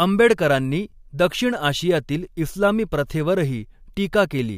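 No technical faults can be heard anywhere in the recording.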